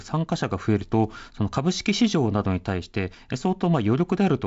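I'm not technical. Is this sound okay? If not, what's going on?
Yes, there's nothing wrong to hear here.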